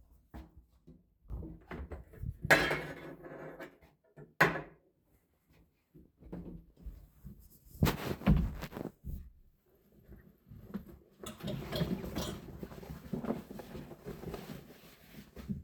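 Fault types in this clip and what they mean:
Sudden gain jump: At 1.3 s the level steps up by about 12 dB with no ramp and stays raised to the end. The sound and its background noise rise together in a single instant. A gain setting applied without smoothing is the likely cause.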